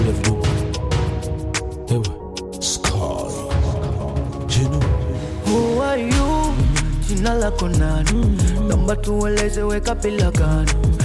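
No technical faults are audible.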